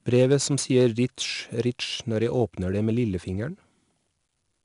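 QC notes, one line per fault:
throughout, 4-bit ADPCM compression: gritty hiss tracks every louder stretch of speech, sharp onsets crunch, and nothing sounds above 10.6 kHz. Each sample is a coarse 4-bit step from a prediction whose adaptive size lags attacks; the cut-off suggests roughly 22 kHz sampling.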